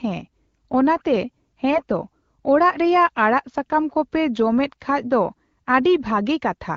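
From 1.70 to 1.81 s the speech turns briefly hoarse and gargly, a burst of AMR bit errors across a few frames of the AMR-WB stream. Corrupted low-priority bits misplace excitation pulses and skew pitch, gain and spectral detail, so level and pitch hold roughly steady while the texture scratches.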